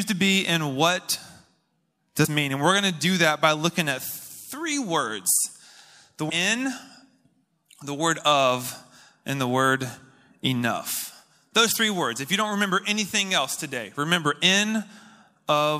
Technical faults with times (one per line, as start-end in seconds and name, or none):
2.24 compressed frames skipped
6.29 compressed frames skipped